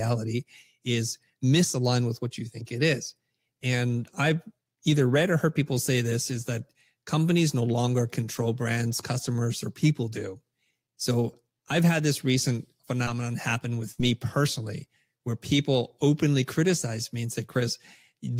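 At 13.92 s a burst of packet loss cut about 60 ms of speech. The receiver stretched and faded the last sound for roughly 62 ms, heard as a held sound that dims away. From 14.00 to 14.06 s, lost packets were rebuilt from error correction, likely two. About 40 ms of low-bitrate copies leave the speech rougher and noisier just before "personally where people openly".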